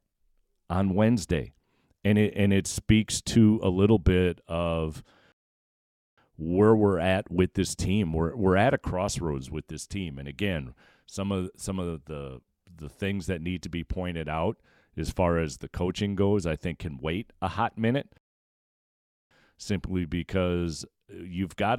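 Rebuffering stalls at 5.32–6.18 s and 18.18–19.31 s interrupt this speech: playback ran dry, fell silent, then resumed exactly where it stopped, adding 0.86 s and 1.13 s.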